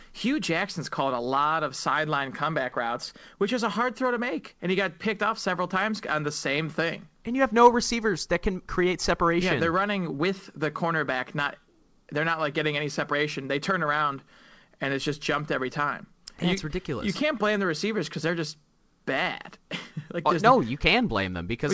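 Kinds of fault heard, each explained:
Clock drift between sender and receiver: The far end's clock is running fast, around 4 percent ahead of the receiver's, so audio keeps piling up in the jitter buffer. The receiver has to keep trimming little bits out of the speech to stop it overflowing.
Repeated timing corrections: From about 0.10 s right through to 21.66 s, the receiver keeps cutting tiny slices out of the speech to keep pace with the 104 percent sender speed. The cuts come at uneven gaps, so at most you get faint hiccups or a slightly restless pace, with the G.722 band stopping at 8 kHz.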